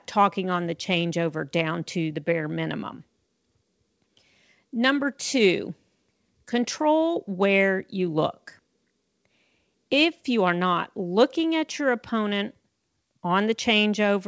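There are no technical faults to describe in this speech clip; it simply carries the band limit of a G.722 call path, with nothing above 8 kHz.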